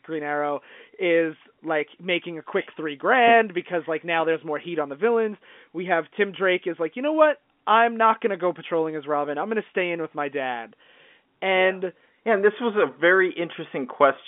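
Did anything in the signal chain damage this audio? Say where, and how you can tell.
No, the speech sits in the normal telephone band of about 200 Hz to 3.5 kHz that G.711 coding gives it, and nothing in the chain can be heard to have harmed it beyond that.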